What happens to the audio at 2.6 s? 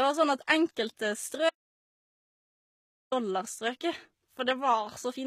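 At 2.6 s the audio is in the middle of an audio dropout to silence running from 1.50 to 3.12 s, about 1.6 s of lost speech. The input likely disconnected or muted while recording continued, so the waveform is a flat line and the spectrogram shows a blank gap with no room tone.

Around that gap, HE-AAC compression is plainly audible. At what sounds like about 20 kbps, the treble is likely rebuilt from copied lower bands, so sibilants turn gritty and lispy. On a spectrogram the upper bands look smeared and repetitive and stop entirely at about 14.9 kHz.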